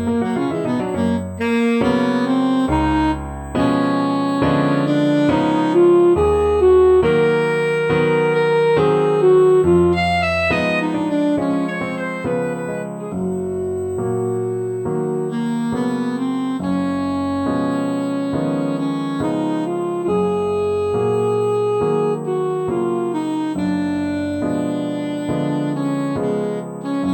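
A thin, steady whine at 8 kHz sits under the audio from start to finish, roughly 35 dB below the signal. This is USB whine: current drawn in the bus's 125-microsecond microframes leaks through power or ground, producing a fixed-pitch tone at that frame rate.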